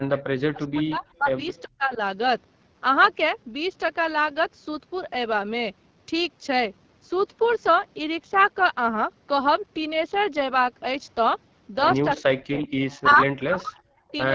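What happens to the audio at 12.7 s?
From 12.63 to 12.83 s there is an echo leak, likely from a loudspeaker on the far end whose echo canceller let part of its microphone pickup back into the call. A faint copy of the sound, delayed by about 383 ms and sitting about 20 dB below the direct signal, trails behind. On a spectrogram it shows as weak, smeared repeats of earlier harmonic patterns.

It follows directly on a stretch of speech suppressed in double talk, from 12.21 to 12.63 s, likely where both sides were active and the canceller pulled the talker down by roughly 40 dB. The speech dips there for about 400 ms. The waveform shows the envelope collapsing toward near-silence.

Throughout, including this moment, the AMR wideband (HD Voice) codec runs at 8.85 kbit/s, where its pulse-based model leaves the speech rough and raspy. A spectrogram shows a detailed band up to 6.4 kHz with only diffuse noise fill between 6.4 and 7 kHz.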